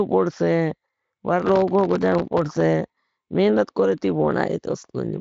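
From 1.40 to 2.60 s the speech is overlaid with processor overload crackle: a rapid run of missed processing deadlines, each leaving a hard-edged sliver of silence. The gaps are tiny, pointing to buffers of under a millisecond, and about a hundred of them pile up into a gritty tearing texture rather than audible holes. Unlike a single dropout or clipping, the damage is dense, stops abruptly as the load passes, and rides over the light, Speex-coded speech band that ends near 7.6 kHz.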